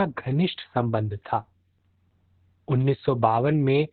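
All the way through, the speech has heavy Opus voice compression in SILK mode. Nothing comes through above about 4.4 kHz, so it's muffled and narrowband, and the coarse excitation coding leaves it hoarse and a bit robotic. That fits a bitrate down around 8 kbps.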